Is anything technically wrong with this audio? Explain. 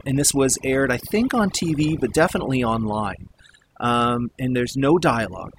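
Yes. Throughout the speech clip there is overdone noise removal. A noise reduction stage was driven too hard, so any frequency band whose level sits close to its noise estimate gets pushed far down or cut entirely, and the softer parts of the voice fall below that line along with the noise. The result is a background of near silence scattered with twinkling, chirpy specks.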